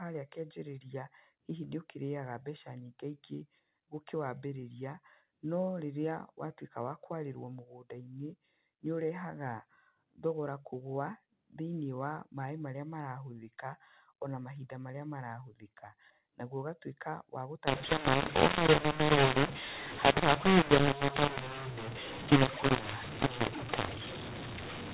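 Up to 17.67 s the speech carries ordinary G.711 telephone coding, with nothing above 4 kHz, which fits 8 kHz sampling. From 17.67 s to the end, mu-law and A-law are mixed up: samples coded as mu-law are read back as A-law, so every level is remapped wrongly. The speech turns harsh and gritty, and pauses fill with hiss. A waveform shows distorted, misshapen amplitudes and a raised noise floor between phrases. A spectrogram shows broadband grain smeared across the band up to 4 kHz.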